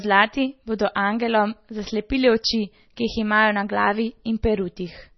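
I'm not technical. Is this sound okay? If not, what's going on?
No. The whole clip sounds dull and watery. This points to MP3 compression, and likely heavy compression. The file was squeezed hard to save space. To do that, the encoder threw away everything above about 5.9 kHz. That is why the crisp top of the speech is missing and s sounds lose their bite. Quiet details also flicker in and out, which gives that swirly, underwater quality.

There is also a pre-echo at about 2.97 s, just after "bodo angelom zaslepili oči". A sharp sound starts there. Just before it, a very brief hiss leaks in, about 10 ms long. The encoder works on small chunks of sound at a time. It spreads its noise across the whole chunk, so some of it lands in the quiet moment before the attack. The start of that sound also comes out soft.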